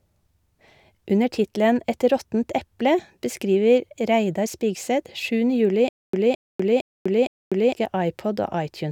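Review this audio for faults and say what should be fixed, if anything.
Stutter with silent gaps, from 5.89 to 7.73 s: a 215 ms fragment of speech plays, drops into 245 ms of digital silence, and returns, cycling every 461 ms for four repeats. The likely cause is a playback or stream stall, where each retry replays the last buffered fragment and then runs dry. The speech that belonged in that span is missing. To prevent it, give the player a deeper buffer and make underruns pause cleanly rather than replaying stale audio.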